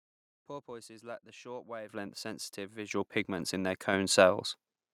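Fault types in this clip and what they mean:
Microphone volume stepped up: The call software judged the microphone too quiet and raised the device's input volume in a single step. The speech and the room noise jump up together, mid-speech. It happens three times. At 1.89 s, just after "lack the short", the level rises by about 10 dB. At 2.91 s, just before "pigments in their", it rises by about 8 dB. At 3.93 s, right after "pigments in their", it rises by about 4 dB more.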